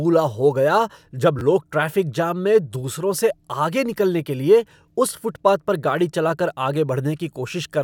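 At 1.39 to 1.41 s, between "हो गया जब" and "ट्रैफ़िक जाम में दूसरों", a repeated buffer occurs: fresh audio arrived late, so the playback device replayed its last block instead. The repeats are so short, fitting a 10 ms buffer played again twice, that they register as a brief buzzy click rather than an audible stutter. Unlike a dropout, the gap is filled with copied sound rather than silence, though about 20 ms of real speech is still lost.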